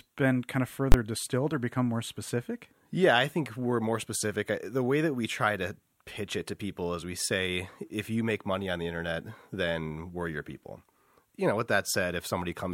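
At 0.92 to 0.94 s, between "been kind of" and "distilled or become more", invalid numbers at full scale pin a 20 ms block to one extreme value: one loud bang, a flat slab far beyond the speech peaks on the waveform, a bright broadband stripe on the spectrogram.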